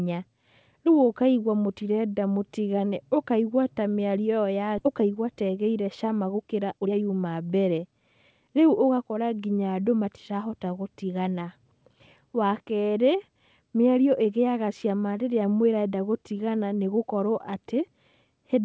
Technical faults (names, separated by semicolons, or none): skip ahead; jitter buffer speed-up